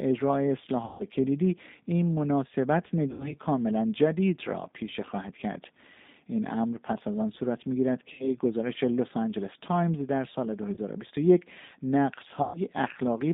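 G.729 codec, throughout: the whole recording has passed through this 8 kbit/s VoIP codec, which rebuilds each 10 ms frame from a vocal-tract filter, a pitch predictor and a few coded pulses. The sound sits in a narrow telephone band of roughly 200 Hz to 3.7 kHz, with nothing above, and the coding damage is plainly audible as a rough, slightly synthetic grain on the speech.

VoIP packet loss concealed by the speech codec, at 0.85 to 1.04 s, 3.11 to 3.34 s, 8.13 to 8.29 s, 10.74 to 10.78 s and 12.42 to 12.60 s: at each of these points packets went missing, and the decoder filled the gap by repeating its last pitch and filter settings at falling gain. The result is a buzzy, smeared stretch that fades. The missing audio runs to about 150 ms, 90 ms, 60 ms, 30 ms and 120 ms, which points to bursts of five, three, two, one and four lost 30 ms packets. Because each frame is predicted from the one before, the speech stays weak and distorted briefly after each gap.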